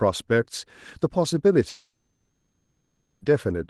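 A short speech clip over a call link, and the trouble hits at 1.69 s: the audio stops arriving and the receiver keeps stretching the last sound into a fading buzzy hiss, then goes quiet around 3.2 s before the speech picks up again at 3.23 s, with everything in between simply gone. That's a long network dropout, most likely packets that never made it, so about 1.5 s is concealed rather than heard. The band tops out near 12 kHz, which fits an Opus call path.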